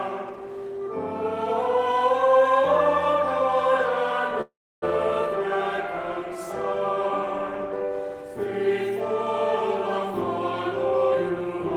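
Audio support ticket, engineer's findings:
Call audio freeze, 4.41–4.84 s: jitter buffer likely ran dry from delayed packets. Last sound stretched, then about 290 ms silence; playback resumes where it stopped, nothing lost.

Jitter buffer speed-up, 10.91–11.71 s: receiver trimmed short pitch-period chunks to drain excess delay. Audio runs 125% speed, pitch unchanged, about a fifth of a second cut, sounds hurried.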